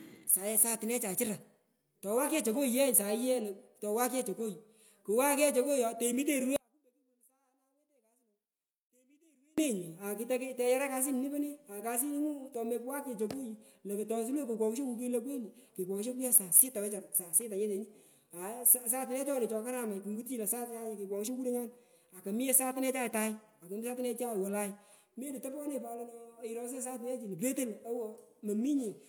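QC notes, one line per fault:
6.56–9.58 s, audio dropout to a faint residue: the speech cuts out abruptly and stays gone for about 3.0 s, with nothing left in the gap but a faint trace of the signal sitting roughly 40 dB below its normal level, then it snaps straight back in mid-flow rather than fading. The sound points to the wanted signal likely being lost upstream while the path after the break stayed live, so only a weak leak of the audio kept coming through.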